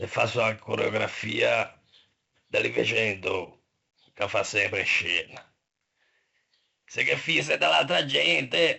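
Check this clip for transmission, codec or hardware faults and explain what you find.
Two faults stand out: a codec problem that runs through the whole speech clip, and a pitch-and-speed jump right at the end.

4-bit ADPCM compression is present throughout. Each sample is coded as a coarse 4-bit step from a predicted value, with the step size adapting as it goes. The damage is heavy, so there's a gritty hiss riding on every louder stretch and some roughness on sharp onsets where the step can't keep up. Nothing reaches above 7.7 kHz, so the top end sounds dull, and that fits a 64 kbps stream at a low sample rate.

From 7.39 s to the end, the audio suddenly runs about 5.5% fast and sits roughly 93 cents sharp, just shy of a semitone, with speed and pitch shifting together. That's likely a drift correction step, where clock-matching software changed the playback rate in one jump to rebalance its buffer. 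Since the clip ends while the change is still in effect, you never hear it snap back.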